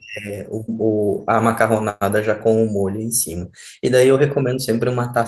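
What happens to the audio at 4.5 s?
Nothing goes wrong at 4.5 s: the audio carries straight through that moment with no dropout, click, distortion or other audible fault.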